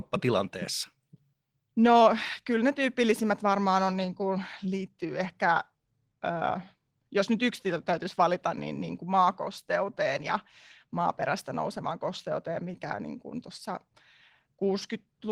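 No technical faults are audible.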